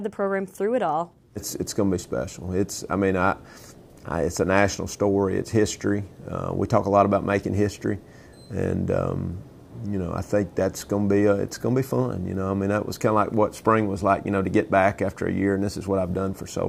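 At 2.69 s and 12.35 s, a bit error spike: one flipped-bit sample reaching about -22 then -34 dBFS, a sharp tick, lone waveform spike, full-band spectrogram line.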